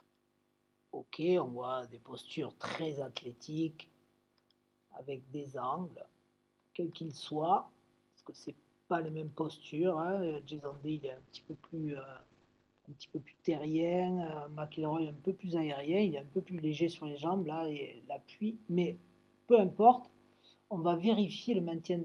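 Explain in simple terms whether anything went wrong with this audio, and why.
From 10.27 to 17.49 s there is a call bitrate drop: the connection squeezed the audio into far fewer bits, so it turns rough and muffled, worst for about three seconds. Unlike packet loss, nothing cuts out; the sound stays continuous, just coarser.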